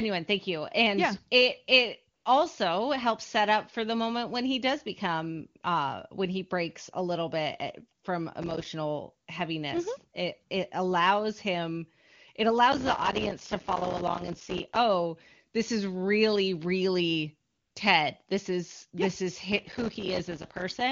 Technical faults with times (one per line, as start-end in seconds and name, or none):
2.15-2.25 AMR comfort noise
8.42-8.66 processor overload crackle
12.72-14.77 processor overload crackle
17.49-17.75 AMR comfort noise
19.52-20.81 processor overload crackle